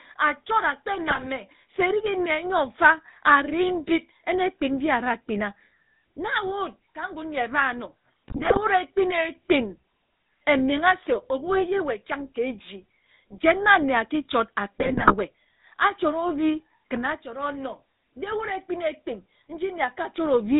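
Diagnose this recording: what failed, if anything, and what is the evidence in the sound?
The codec stage shows GSM full-rate coding throughout. The speech has a buzzy, gravelly roughness and nothing above 4 kHz, which fits the 13 kbps full-rate scheme. It drives a vocal-tract filter with sparse regular pulses, so the fine excitation detail is plainly lost.

GSM bit errors on the network link are heard at 1.1–1.27 s, 8.28–8.59 s and 14.8–15.14 s, where the speech breaks into squawks, pops and gargling. Corrupted filter, pitch and gain parameters reached the decoder, distorting the spectrum and spiking the level frame by frame.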